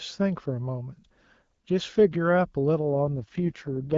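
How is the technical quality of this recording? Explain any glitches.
The speech is carried over an HD Voice call, with a slight coded edge from the AMR wideband codec, and one glitch near the end. From 2.92 s to the end at 3.98 s the speech turns rough, raspy and synthetic, with no gap and no loss of bandwidth. This is an AMR rate drop: the network pushed the codec to a lower mode to spend more bits on error protection. The sound fits a fall from 12.65 to 6.6 kbit/s.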